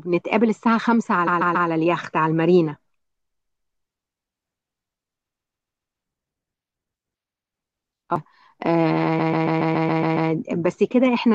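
At 1.26 s the speech stutters: a block of about 139 ms plays three extra times, lengthening that stretch by about 0.42 s. This is repeated frames. A run of compressed frames, roughly six frames long by its duration, reached the decoder more than once, so the same slice replays. The same fault returns at 3.17 s with five extra plays (0.70 s added). At 4.16 s a CD skip cuts in: a tick over a mute of a few milliseconds, after which playback resumes from a different point, as when the laser jumps to another turn of the disc's spiral. Repeated frames recur at 5.28 s, again five extra plays of the 139 ms block (0.70 s added), and at 7.32 s, where a shorter block of about 93 ms plays twice more (0.19 s added). A second CD skip at 8.15 s gives another brief tick and jump. The longest repeat starts at 9.18 s, with the 139 ms block heard eight extra times, adding about 1.1 s before the speech moves on.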